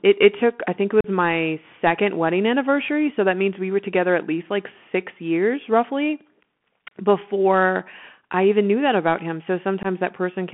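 Bluetooth CVSD headset codec damage runs through the whole of this speech recording. The sound is squeezed into a telephone band of roughly 200 Hz to 3.4 kHz, and a grainy hiss sits beneath it. Sibilants come out scratchy, and louder bright passages break up where the codec's adaptive step cannot keep pace, a pattern that fits a 64 kbps one-bit delta-modulation link. Unconcealed Bluetooth headset packet loss then cuts two holes into the audio. The first runs from 1.01 to 1.07 s, with about 37.5 ms missing, which points to a handful of consecutive packets dropped between headset and phone. The second runs from 9.83 to 9.86 s, with about 15 ms gone, suggesting a couple of packets. In both, nothing fills the gap: the signal stops and restarts with hard edges, and it returns momentarily quieter as the CVSD step size rebuilds.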